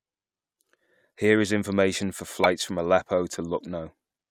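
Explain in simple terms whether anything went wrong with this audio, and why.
Something did go wrong, briefly. Between about 2.40 and 2.46 seconds into this speech clip, the audio jumps ahead. This fault is called compressed frames skipped. The file stores sound in small chunks called frames. Here frames were missing or too damaged to play, so the player skipped them. Only a tiny slice of sound is lost, around a fiftieth of a second.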